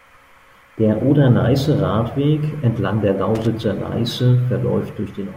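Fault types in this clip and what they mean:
Loose connector crackle: a brief, irregular burst of scratchy crackle breaks into the speech from about 3.35 to 3.47 s, roughly a tenth of a second of rough, broken-up sound before the signal runs clean again. A worn or dirty contact somewhere in the cable or plug path is shifting and rapidly making and breaking the connection, chopping the audio into fragments, with any DC present on the line adding pops at each break.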